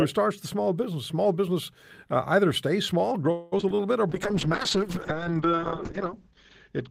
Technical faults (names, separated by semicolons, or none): call audio freeze; repeated packet loss (robotic sound); call bitrate drop